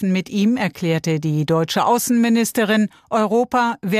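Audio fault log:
1.33 s, bit error spike: a single sharp tick lasting two samples, peaking at about -34 dBFS. A flipped bit shifted those sample values by a power of two before they snapped back, so the click is broadband and has no relation to the surrounding sound.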